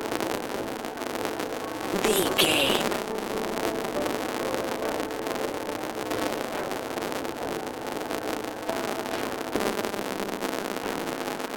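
From start to finish, a steady buzz at 200 Hz sits under the sound. This is a filter restarted on every block. The filter drops its stored state at each block boundary and begins again from silence. Each restart leaves a small transient. They arrive every 5 ms, which points to processing blocks of that length. Together they fuse into a tone at the block rate. The buzz rises and falls with the level of the sound.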